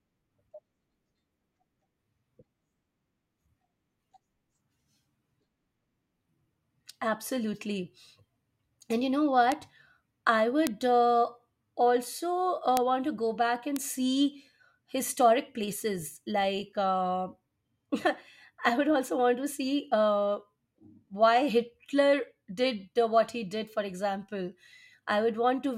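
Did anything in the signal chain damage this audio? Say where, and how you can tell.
Yes. There are bit error spikes in the digital path (memory, storage or a digital link), heard as isolated ticks at 9.52 s after "you know", 10.67 s, 12.77 s before "want to go back", and 13.76 s before "see historic places", peaking at about -12 to -6 dBFS. Each lasts only one to three samples, so it is a broadband tick unrelated to the speech rather than a dropout gap or a crackle.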